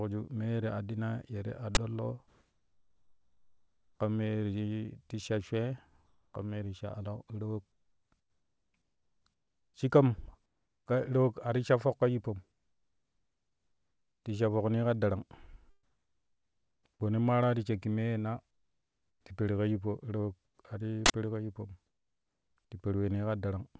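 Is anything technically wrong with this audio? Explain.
Yes. The speech carries two kinds of fault, heard over a G.722 call path that has nothing above 8 kHz.

An uninitialised buffer causes a short, very loud burst of digital noise at 1.75–1.77 s and again at 21.06–21.10 s. Playback read memory that had not yet been filled with audio, so leftover values came out as samples. On the waveform, each burst is a block of garbage. On the spectrogram, each is a broadband vertical bar.

Comfort noise in place of the background fills the pauses at 2.28–4.00 s, 6.06–6.34 s, 7.72–9.74 s, 12.52–14.24 s, 15.83–16.85 s, 18.51–19.25 s and 20.45–20.59 s. The real background gives way to a steady, featureless hiss, usually about 3 to 8 dB quieter. This is likely discontinuous transmission, where the sender stopped sending during silence and the receiver synthesised noise to fill the gap. On a spectrogram, these stretches look smooth and uniform, with none of the texture of the surrounding background.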